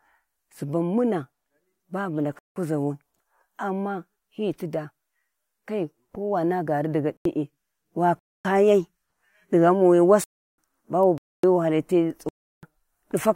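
Whole buffers of output went unfilled and were replaced with zeros, a block of digital silence each time, at 2.39–2.56 s, 7.17–7.25 s, 8.19–8.45 s, 10.24–10.58 s after "di ghauwi", 11.18–11.44 s just before "wu hali ti", and 12.29–12.63 s after "wu hali ti". The lengths, from 85 to 341 ms, are whole multiples of 85 ms, which fits fixed-size buffers. The speech drops abruptly into dead silence and snaps back.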